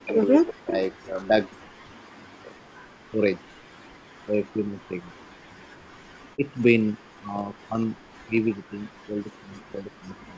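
A speech recording carries overdone noise removal throughout: a noise reducer set far too aggressively kept switching off individual frequency bands that sat near its noise estimate, taking quiet parts of the speech with them. The background drops and breaks up into twinkling specks. There is also speech suppressed in double talk, likely an echo canceller that could not tell this talker from the far end's echo while both spoke and so pulled everything down. The speech sinks by around 40 dB or breaks into fragments at 0.0–1.65 s, 1.83–2.69 s, 2.90–3.58 s, 3.93–6.04 s, 6.33–7.96 s and 8.14 s to the end.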